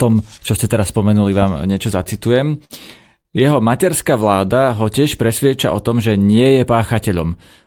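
A burst of packet loss hits this speech recording at 2.65 to 2.73 s: the receiver stretched and faded the last sound for about 50 ms, then jumped ahead, dropping 40 ms of audio. A short stall from a late packet follows at 3.22 to 3.28 s, where the jitter buffer ran dry and the receiver held the sound for about 31 ms before resuming, so nothing is lost but playback lands 31 ms later.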